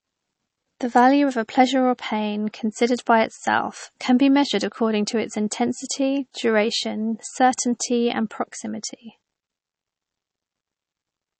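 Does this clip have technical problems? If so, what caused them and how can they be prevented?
Yes. Throughout the speech, plainly audible MP3 compression, likely from a low bitrate: nothing survives above 8.3 kHz, which fits about 32 kbps, and weak spectral lines flicker between frames, leaving a watery swirl that a simple low-pass filter wouldn't add. Encoding at a higher bitrate prevents it.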